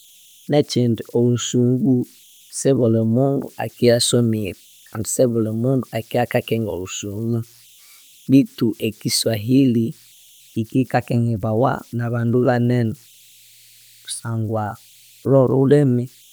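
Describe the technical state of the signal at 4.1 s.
At 4.1 s a faint, thin whistle sits around 3 kHz, with a grainy hiss under the quieter parts of the speech, about 33 dB below the signal. These are converter idle tones, present for the whole clip rather than only at this moment. A delta-sigma converter running without dither has slipped into repeating bit patterns at low input levels. Those cycles produce steady tones whose pitch follows the input's offset, so they surface in gaps and soft passages.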